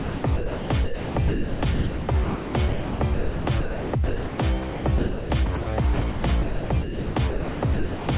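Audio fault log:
0.0–4.38 s, 4.7–5.3 s and 5.94–8.08 s: sound chopped by the voice detector. Within these spans the sound repeatedly drops out and is replaced by comfort noise: about 3.16 s, 0.46 s and 1.5 s in turn. This is likely caused by a sender-side detector switching transmission off and on. On a waveform, the sound's envelope gives way to flat, steady stretches of noise several times. On a spectrogram, those holes appear as uniform, featureless bands, cut off at 4 kHz like the rest of the G.711 call audio.
5.62–5.66 s: sound dropped by the voice detector. A 40 ms piece of sound is missing and steady comfort noise fills the gap. This is likely because the detector judged the sound to be background and paused transmission until it triggered again. On a waveform, it shows as a short, even-level notch in the envelope. On a spectrogram, it is a thin vertical slice where the structure of the sound disappears into smooth noise below 4 kHz.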